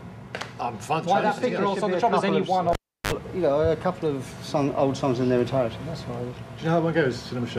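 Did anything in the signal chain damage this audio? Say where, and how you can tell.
Yes. The damage is in the analogue wiring: a cable pulled and plugged in while live, between 2.73 and 3.12 s. A pop opens the event as the connection breaks. Near silence follows for about 335 ms while the plug is out. A burst of 50 Hz mains buzz lasting about 49 ms comes next, when only the tip touches and the unscreened input picks up hum. A second pop marks the sound returning as the plug seats fully.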